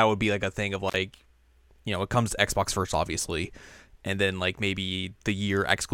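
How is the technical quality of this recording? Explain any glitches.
There's one glitch here, right near the start. At 0.88 to 0.96 s there's an intermittent contact: a loose plug or cable briefly opens, so the speech drops out for about 44 ms with crackle at either edge.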